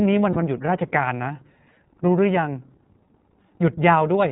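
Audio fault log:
throughout, iLBC codec: the speech has been squeezed through a narrowband VoIP codec, and the coding damage is plainly audible. It has a slightly rough, synthetic edge, and everything above 4 kHz is missing, so sibilants sound dull. The bitrate and framing fit iLBC's 13.33 kbps mode with 30 ms frames. On a spectrogram, energy stops at a flat ceiling near 4 kHz across the whole clip. The harmonics look grainier than in clean speech.
0.33 s, lost iLBC frames: one 30 ms frame goes missing here. The decoder fills the gap by repeating the last pitch cycle blended with noise, so the speech briefly turns into a held, faintly buzzy vowel. Each iLBC frame decodes on its own, so normal speech returns almost immediately afterwards. On a spectrogram, a short strip near 0.33 to 0.36 s shows frozen, smeared harmonics. The waveform shows a brief run of near-identical repeated cycles.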